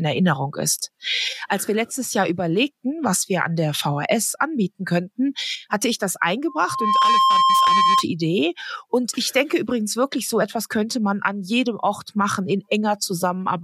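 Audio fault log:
6.47–8.04 s, loudspeaker feedback squeal: a microphone is picking up the loudspeaker it feeds, and at 1.1 kHz the loop gain climbs past one, so that frequency recirculates and reinforces itself on every pass. A pure tone swells out of the sound over roughly half a second, settles at about 5 dB above the programme, and rings steadily until it stops at 8.04 s.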